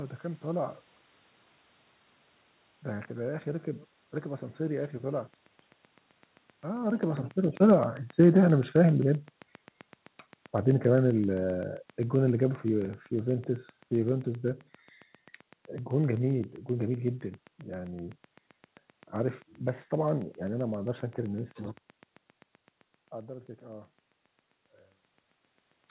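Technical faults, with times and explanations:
5.34 s to 25.91 s, train of clicks: a regular ticking at 7.66 clicks per second, each click of the same shape and peaking at roughly the level of the speech, audible through the pauses as well. The likely source is electrical interference from nearby equipment or a faulty connection or power supply injecting pulses.
6.73 s to 9.16 s and 10.53 s to 14.25 s, automatic gain falling: the gain control judged the input too loud or its background noise too strong and eased its gain down, by about 5 dB in the first stretch and about 4 dB in the second. Speech and background sink together. This is separate from the talker moving near 6.5 s.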